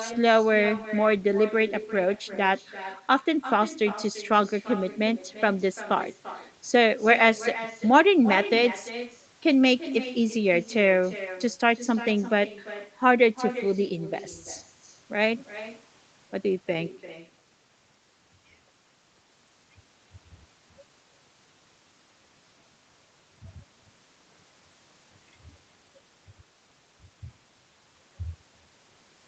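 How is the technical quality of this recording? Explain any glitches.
The main problem is an echo that runs through the whole recording, within a band that stops at 8 kHz, consistent with a wideband Opus call at around 20 kbps.

Echo with no canceller, throughout: the far end's loudspeaker feeds its microphone, returning the speech roughly a third of a second later, about 14 dB quieter and thinner.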